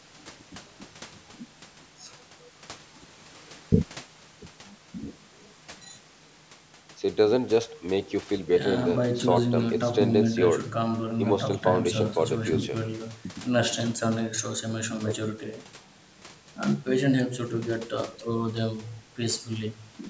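No technical faults can be heard in the speech, which carries the normal marks of a call's microphone processing: nothing above 8 kHz and the lowest bass taken out by its high-pass filter.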